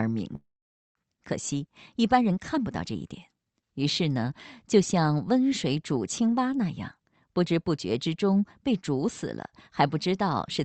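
A speech recording with two faults. At 0.35 s the sound breaks up in what is likely a long network dropout. The last sound is stretched into a fading buzz, then silence, until 0.97 s. About 0.4 s of the speech never returns. From 1.05 s to 3.63 s a jitter buffer speed-up follows. The receiver trims tiny pitch-period slices to shed the built-up delay, about a fifth of a second in all. The speech runs at 107 percent with unchanged pitch and sounds hurried.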